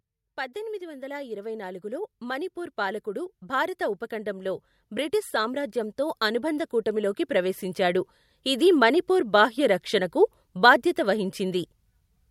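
From 0.52 s to 8.8 s, automatic gain rising sets in. The gain control judged the input too quiet and kept raising its level, by about 16 dB. Speech and background swell together. The climb ends just before "మణిపూర్ బాహ్య రక్షణకు బాధ్యత".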